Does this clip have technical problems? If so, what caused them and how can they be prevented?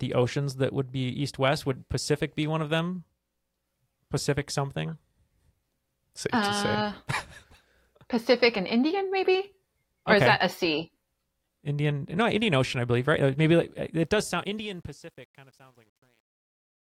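Yes. The speech has truncation distortion on the fade-out, from 14.03 s to the end at 16.97 s. The level itself falls smoothly from around 14 s. But the gain stage rounded each sample to too few bits, with no dither. The sound suggests about 10-bit resolution. As the level drops, the waveform collapses into coarse steps. From 14.87 s on it turns gritty. To prevent it, apply fades at high resolution and dither when reducing bit depth.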